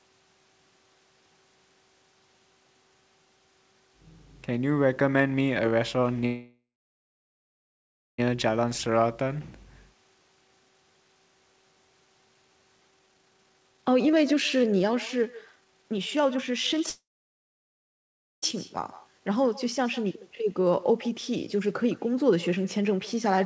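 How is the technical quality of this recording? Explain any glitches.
The recording has clear call-transmission faults. Echo runs through the whole clip, the audio freezes twice, and the playback speed shifts several times. The audio stops at 8 kHz, which fits a G.722 call at 64 kbps.

Echo with no canceller is present from start to end. The far side played the call on a loudspeaker. Its microphone caught that sound, and nothing removed it. The copy returns roughly 150 ms later, about 20 dB below the speech. Each phrase gets a faint, thin shadow trailing just behind it.

A call audio freeze occurs twice. The first runs from 6.26 to 8.20 s and the second from 16.90 to 18.44 s. Packets were likely held up in the network, and the jitter buffer ran dry. The receiver stretched the last sound into a fading buzz or hiss, then went silent for about 1.5 s and 1.4 s. The speech then resumes where it stopped. 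Nothing is lost, but a gap of about 1.9 s and 1.5 s is inserted.

Jitter buffer speed-up follows the backlog. It happens at 8.34 to 8.71 s (109%), 12.90 to 16.81 s (138%), 18.78 to 20.99 s (106%) and 21.84 to 23.40 s (106%). The receiver cut out short pitch-period slices to reduce excess delay. About 1.5 s was removed in the long stretch. The pitch stays the same, but the speech sounds hurried, most clearly around 13 to 17 s.

Jitter buffer slow-down comes at 8.90 to 9.29 s. The buffer was rebuilding its reserve, so the receiver repeated single pitch periods and added about 50 ms. Playback drops to 89% speed at the same pitch. Sounds come out drawn out.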